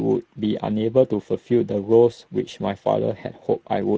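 Speex codec damage runs throughout the speech: starved excitation coding makes it plainly hoarse and noisy, fitting a mid-range Speex bitrate near 17 kbps.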